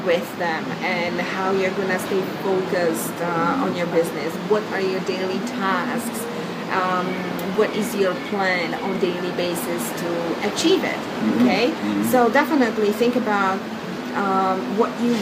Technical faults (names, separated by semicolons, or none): resampler restarted on every block